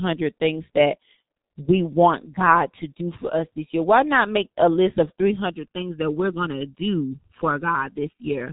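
From the start the speech carries the G.723.1 codec's heavy damage. Nothing comes through above 3.8 kHz, and the slow, coarse frame-by-frame modelling, which fits a rate near 6.3 kbit/s, leaves the talker muffled and hoarse, with smeared consonants throughout.

At 5.50 s channel delay (comb filtering) comes in and stays to the end. One channel is running under a millisecond late, and once the two are summed, shared content cancels at regular intervals starting around 700 Hz, so the speech goes hollow and phasey.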